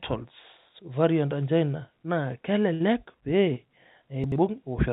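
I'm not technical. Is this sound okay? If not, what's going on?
No. At 2.74 to 2.82 s there is a burst of packet loss. A run of network packets, about 60 ms of audio, never arrived in time. The receiver stretched the last sound and faded it, so you hear a brief held buzz or hiss before the speech picks up again with that bit missing.

At 3.54 to 3.58 s a short concealed packet loss occurs. About 20 ms of the call failed to arrive, and the receiver patched the hole by continuing the previous sound. You hear a tiny smear or wobble, and a quick consonant may drop out.

At 4.24 to 4.36 s the chunks are out of order. One 40 ms piece of audio arrived late and played two pieces after where it belonged. Nothing is lost, but the sound briefly jumbles.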